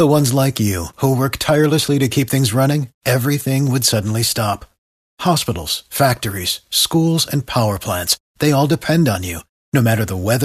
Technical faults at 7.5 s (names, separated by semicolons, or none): none